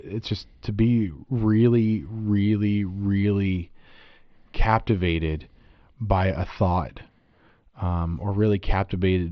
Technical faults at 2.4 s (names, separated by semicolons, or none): none